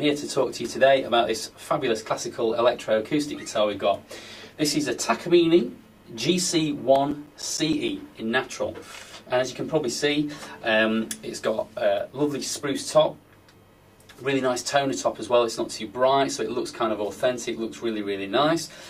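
From 6.80 to 8.19 s, CD scratch ticks appear: a blemish on the disc wipes out more data than error correction can restore, once per revolution, so the player patches or mutes the damaged samples. The result is ten small, evenly spaced ticks in about 1.4 s, roughly seven per second. Each is a brief click or micro-dropout, the longest around 10 ms, and the ticks vary in strength.

From 11.74 to 13.39 s, a call bitrate drop occurs: the connection's bandwidth estimate collapses and the encoder is pushed to spend far fewer bits, which fits a fall from 64 to 25 kbps. The coarser coding makes the sound rough and watery. The degraded stretch lasts about 1.6 s before quality returns as the bitrate climbs back.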